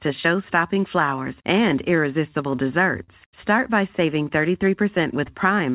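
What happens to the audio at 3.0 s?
A short stall from a late packet runs from 3.03 to 3.10 s. A packet missed its deadline, the jitter buffer ran dry, and the receiver stretched the last sound by 47 ms before resuming. The sound holds unnaturally with a faint buzz or dip. On a spectrogram, frozen horizontal bands appear. The waveform shows a repeating cycle.

This moment also falls inside repeated timing corrections caused by clock drift between sender and receiver. The sender's clock runs about 5% slow, so the receiver keeps padding small pieces across the clip. Playback runs at 97% speed and adds about a fifth of a second overall. A waveform shows tiny repeated segments at irregular spacing.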